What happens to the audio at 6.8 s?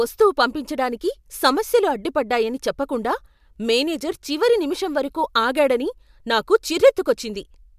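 Nothing goes wrong at 6.8 s; the speech carries on intact through that moment.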